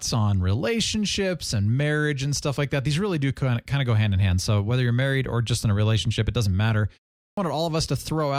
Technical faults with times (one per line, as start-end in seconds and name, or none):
7.32-7.37 clipped start after a pause